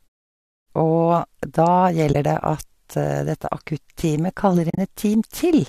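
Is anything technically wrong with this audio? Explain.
Yes, there is AAC frame loss with muting. At 2.13 to 2.15 s, about 20 ms of the speech, consistent with two short frames, was zeroed by the decoder. The overlapping windows fade it out and back in softly. On a spectrogram it is a narrow vertical gap, and the waveform tapers to flat and back. At 4.70 to 4.78 s, 70 ms of loss is scattered over 80 ms, with the longest run roughly 40 ms. This makes a broken, stuttering dropout that shows as several short blank columns. The short frames point to low-delay AAC, likely AAC-ELD.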